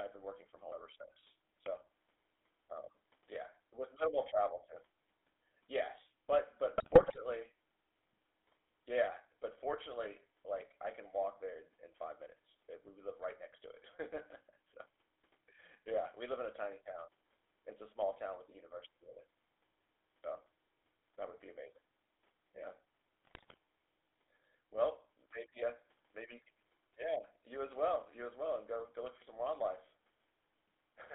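Throughout, the speech sounds buzzy and gravelly, confined to roughly 250 Hz to 3.6 kHz. This is the GSM full-rate codec, which rebuilds the voice from coarse pulse excitation at about 13 kbps.

At 0.72 s the sound makes a sudden jump forward, about 40 ms of sound missing. It is likely a dropped buffer (overrun), the audio overwritten before it was read.

From 6.76 to 7.17 s the voice breaks into squawks and gargling. GSM bit errors corrupted the decoder's filter, pitch and gain values across successive frames.

At 20.24 s another skip of about 40 ms recurs, likely from the same dropped-buffer fault.

From 23.24 to 23.57 s the same squawking, gargled breakup returns, again from GSM bit errors reaching the speech decoder.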